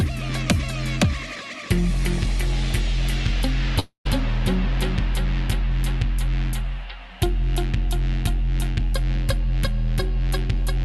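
From 3.79 to 4.07 s the sound breaks off in what is likely a long network dropout. The receiver stretches the last sound into a fading buzz or hiss for about a quarter of a second, the last 0.11 s or so of it near-silence, before the audio resumes, with the missing part gone. That decaying fill and the gap set it apart from a brief packet-loss click or a clean edit cut. The coded band tops out around 12 kHz, which fits an Opus call codec.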